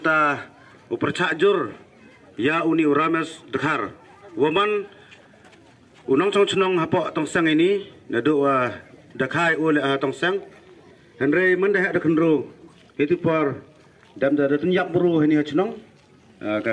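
There are no technical faults to describe anywhere in this audio.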